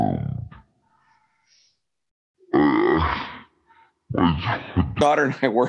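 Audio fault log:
0.00–5.01 s, wrong sample rate: the speech runs at half speed and sits a full octave low (about 12 semitones down), slow and heavy until normal playback returns before "and I were". Speed and pitch fall together because the samples are clocked out at half the rate they were captured, which fits 48 kHz audio played at 24 kHz. On a spectrogram the harmonics and formants sit at half their usual frequencies; the waveform's syllables are stretched to twice their length.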